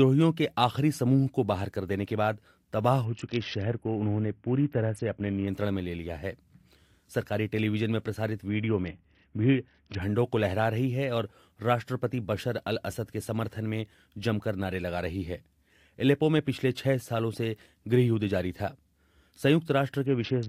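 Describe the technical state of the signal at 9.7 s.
At 9.7 s the audio is inside a Bluetooth SBC bit pool drop, running from 8.49 to 10.02 s. The link was congested, so far fewer bits were spent per frame. Top sub-bands lost their share and the rest were coarsely quantised. Treble sounds dull and gritty noise rises, which fits a bit pool cut from 31 to 6, around 55 kbps.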